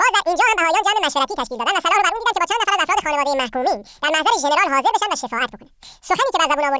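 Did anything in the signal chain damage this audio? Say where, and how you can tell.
Yes. A wrong sample rate runs through the whole speech clip, introduced at playback. Every voice is exactly an octave high, 12 semitones, and runs at twice normal speed, with pitch and tempo shifted by the same factor and no formant correction. That locked pairing means the samples were clocked out faster than they were captured, with no resampling. A 2.0 ratio fits 8 kHz telephone-band material being played as if it were 16 kHz.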